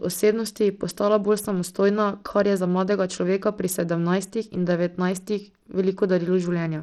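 Throughout, the speech has flickering, dropping treble with gritty grain and aliasing, likely Bluetooth SBC compression starved near 80 kbps; unlike MP3 swirl, the damage sits in fixed sub-bands.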